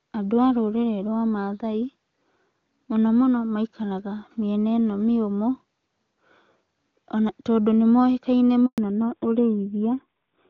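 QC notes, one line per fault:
8.66 to 8.78 s, handover gap: just after "tondũ nĩ moĩkaine" the speech fades out within a few tens of milliseconds and stays silent for about 120 ms. No speech frames arrived while the call switched networks, so this stretch is lost.
8.78 to 10.50 s, fallback to narrowband: from the gap onward nothing remains above 4 kHz, and the speech turns dull and rougher. The call dropped from HD Voice to a narrowband codec, which fits AMR-NB at a low rate of around 7.4 kbit/s.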